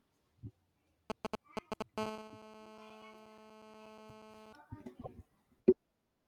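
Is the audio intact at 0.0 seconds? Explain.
Yes, the audio is intact at 0.0 seconds, with no fault present at that moment.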